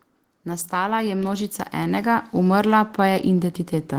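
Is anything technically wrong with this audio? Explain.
Yes. From 0.3 s to 3.64 s the whole clip slowly swells louder, the speech and the background noise rising together by about 10 dB. That is automatic gain rising: the gain control judged the input too quiet and kept turning its gain up across those three seconds.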